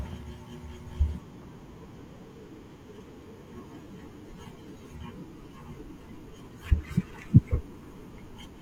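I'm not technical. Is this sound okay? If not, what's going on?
No. Parts of the compressed file holding this speech have damaged data, meaning some of the stored information was lost or scrambled. When the player reaches those spots, it can't read them properly and has to hunt for the next good piece before carrying on. Each time, you hear a brief chirp or blip lasting a fraction of a second: from 1.05 to 1.10 seconds, from 3.48 to 3.52 seconds, and from 6.46 to 6.51 seconds.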